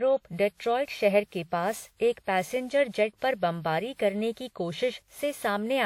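Throughout, the speech sounds swirly, smeared and hollow, with blurred attacks and nothing above 19.6 kHz, likely generation loss from around ten WMA re-encodes, consistent with roughly 96 kbit/s.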